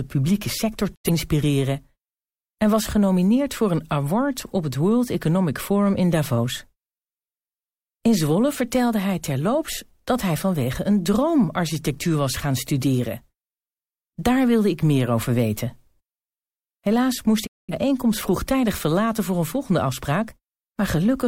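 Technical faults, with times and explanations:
0.94–1.10 s, digital broadcast dropout: right after "publieke sector" the receiver lost valid frames and muted. The speech fades out over about 20 ms and returns roughly 85 ms later, which fits two lost frames.
17.45–17.74 s, digital broadcast dropout: a longer mute of roughly 213 ms, about five lost frames, with a short fade. Speech resumes at "vroegtijdig verlaten voor een".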